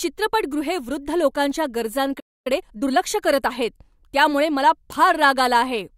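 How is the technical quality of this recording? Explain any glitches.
The recording has a clear break in the middle of the speech and a brief hurried stretch right after it.

Playback stall, 2.19 to 2.47 s, after "वृद्ध लोकांच्या": the speech drops to silence for about 0.26 s, likely because the player ran out of buffered data.

Time-compressed catch-up, 2.47 to 2.97 s, before "करत आहेत त्यामुळे मला": the player trims its backlog by cross-fading out small slices. The speech plays at 1.5 times normal speed, rushed but at normal pitch, which distinguishes it from a sped-up tape.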